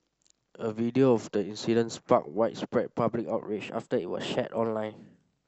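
At 3.46 s the speech suddenly runs about 6% faster and jumps roughly a semitone sharp, staying that way to the end at 5.48 s. It's likely a drift correction step, where clock-matching software bumped the playback rate in one go to rebalance its buffer.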